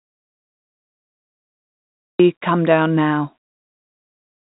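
Audio dropout to silence runs from the start to 2.20 s: dead digital silence without room tone, likely from a lost input, until "come down now" begins.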